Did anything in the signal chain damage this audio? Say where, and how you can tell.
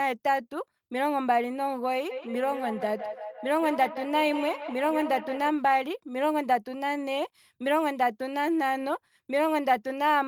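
Yes. From 2.11 s to 5.52 s the speech comes back at a fixed interval of roughly 150 ms, each repeat thinner and more ringing, peaking about 10 dB below the direct sound. That is feedback echo between two devices at the call-processing stage: a second device in the room replays the signal, its microphone recaptures it, and neither echo canceller removes the other's output.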